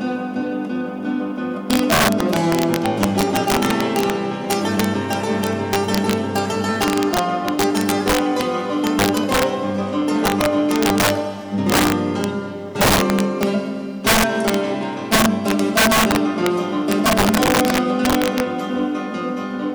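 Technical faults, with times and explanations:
Throughout, integer overflow: the signal is driven about 7 dB past full scale, and the small share of peaks over the limit wrap around to the opposite extreme instead of flattening. This gives violent, snapping cracks on loud moments, far harsher than clipping's buzzy squaring-off.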